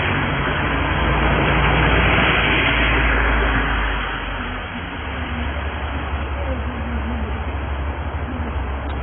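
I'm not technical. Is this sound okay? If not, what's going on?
No. Throughout, the sound is dull and smeared, with nothing above about 3.4 kHz and a warbly, fizzy texture on steady parts. That points to heavy AAC compression as the likely cause. Simple muffling would only lose the top, without this swirling grit.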